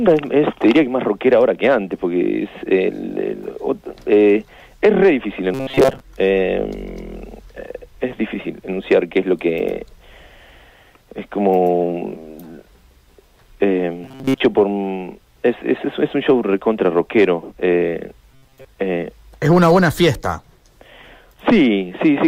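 Three stretches of the audio turn into a rigid metallic buzz at 133 Hz: 5.54 to 6.00 s, 14.04 to 14.40 s, and 18.32 to 18.65 s. This is robotic sound from repeated short buffers. The likely cause is a buffer of about 7.5 ms being replayed, so most of the real audio there is skipped.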